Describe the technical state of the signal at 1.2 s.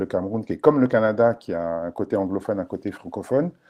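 The speech at 1.2 s is intact, with no audible fault at that moment.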